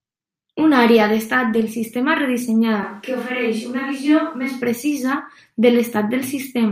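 At 2.83 s the speech suddenly turns roomy and hollow. The bass thins out and the sound takes on the character of the space around it. This is a switch to a distant microphone, most likely because the close microphone's signal dropped out and a mic further away took over. The level stays about the same. Room noise stays low, roughly 40 dB below the speech. At 4.62 s the close, full sound returns just as abruptly.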